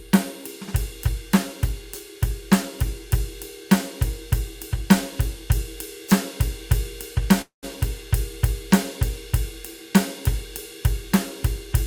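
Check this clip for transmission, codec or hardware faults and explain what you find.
One fault turns up, a call audio freeze from 7.41 to 7.65 s. Delayed packets likely emptied the jitter buffer. The music stalls into a brief fading fill, then 140 ms of silence, before resuming exactly where it stopped. Nothing is lost, but the gap pushes everything after it about 214 ms later.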